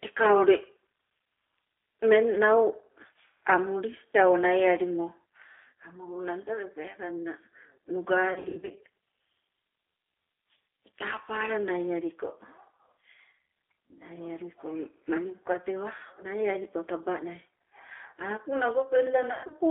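A speech recording carried throughout by the G.729 codec, heard as a telephone-band line running from about 300 Hz to 3.5 kHz. The codec damage is plainly audible as a slightly rough, synthetic edge, which fits an 8 kbit/s G.729A coder that rebuilds the sound from a vocal-tract filter, a pitch predictor and a few pulses per frame rather than sending the waveform itself. On a spectrogram, everything above 3.5 kHz is empty and the harmonics look grainy and smeared.

Two stretches show VoIP packet loss concealed by the speech codec. From 8.33 to 8.76 s, about 270 ms of audio goes missing in gaps scattered across 420 ms, the longest lasting 90 ms. From 19.32 to 19.54 s, 150 ms goes missing within 180 ms, including one 120 ms run. In each gap the decoder keeps repeating its last pitch and filter settings at falling gain, so the sound turns into a fading buzz or coloured noise. Because each frame builds on the one before, the speech stays weak for a short while after audio resumes. 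On a waveform the envelope sags and flattens into even, repetitive cycles, and a spectrogram shows frozen, fading harmonic bands.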